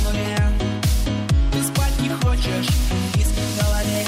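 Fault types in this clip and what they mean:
No faults can be heard anywhere in this audio.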